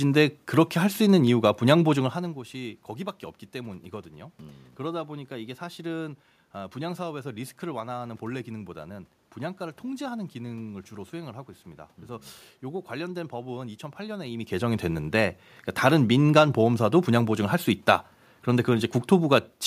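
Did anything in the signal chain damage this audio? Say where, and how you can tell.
No, nothing in the signal chain has damaged this speech recording: the background noise is the room itself, and the level shifts early on and again later in the clip are the talker's distance to the microphone changing.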